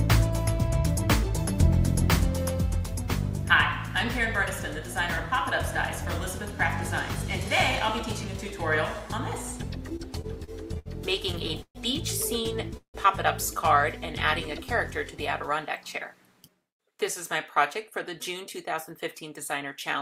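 From 9.89 to 10.88 s there's a burst of repeated stalls, a stutter. Packets were coming in late, so the jitter buffer kept running dry and the receiver stretched the last bit of sound to cover each hole. You hear six small hitches, the longest about 68 ms, adding up to 183 ms of filled-in sound, roughly a fifth of that stretch. Nothing actually drops out. It just catches and drags.

It happens again from 11.32 to 11.77 s, and this time it's worse. There are five stalls totalling 171 ms, one of them a full 130 ms, so nearly 40 percent of that half-second is concealment rather than real audio. The long one is held and fades before things pick up again.

Then at 12.77 s the call audio freezes for about 0.19 s. The last sound hangs briefly as a fading buzz or hiss and then goes silent for about 100 ms before the audio resumes exactly where it left off. The likely cause is packets held up in transit long enough to empty the buffer completely. 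About 168 ms gets inserted and nothing is lost, so everything after it sits that much later.

From 14.06 to 14.57 s there's a jitter buffer slow-down. With its reserve low, the receiver repeated single pitch periods to build it back up, adding 41 ms. Playback runs at about 93 percent speed with the pitch unchanged, so sounds in that half-second come out slightly drawn out.

Finally, from 16.34 to 16.99 s, a jitter buffer speed-up goes the other way. The buffer had more stored than it wanted, so the receiver trimmed out short pitch-period chunks, about 70 ms in total. That part plays at roughly 111 percent speed at the same pitch, and it comes across as a little hurried.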